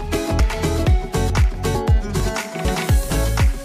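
The audio skips forward at 0.40, 1.30, 1.75, 2.20, 2.65 and 3.10 s, each jump dropping around 50 ms with no gap, which points to audio missing between chunks, likely from 0.5 s processing blocks. On a spectrogram or waveform each skip is a sharp vertical seam.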